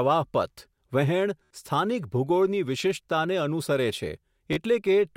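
Bluetooth stutter hits this speech clip from 1.44 to 1.51 s and from 4.53 to 4.57 s. The receiver ran short of data and kept replaying its last short slice, giving a brief machine-gun buzz, then jumped ahead about 67 ms and 40 ms, which fits a few lost packets.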